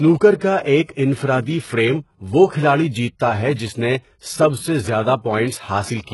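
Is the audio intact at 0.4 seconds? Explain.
No. From 0.38 to 0.41 s, a brief wash of hiss arrives ahead of an attack, about 27 ms of noise filling what should be a quiet gap, and the onset itself sounds softened and smeared. This is pre-echo: the codec spreads quantisation noise across a whole transform block, so when a sharp onset lands late in that block, noise scaled to the loud part leaks into the silence before it.

Across that same moment the treble has a gritty, metallic edge, with sibilance sounding lispy, and nothing is present above 11.5 kHz. The likely cause is heavy HE-AAC compression, consistent with a very low bitrate of around 12 kbps. Only the lower spectrum is truly coded. The upper bands are rebuilt by copying lower ones upward under a coarse envelope, so harmonics fail to line up at the crossover.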